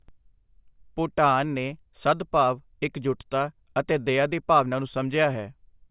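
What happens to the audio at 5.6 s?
Nothing goes wrong at 5.6 s: the speech carries on intact through that moment, with no dropout, click, distortion or other fault to be heard.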